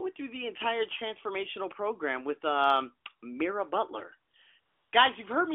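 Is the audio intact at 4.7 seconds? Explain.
No. AMR comfort noise covers 4.60 to 4.92 s. The phone stopped sending sound frames for 320 ms. The receiver filled the gap with steady, smooth synthetic noise.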